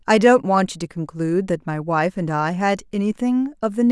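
No technical faults can be heard at any point in the speech.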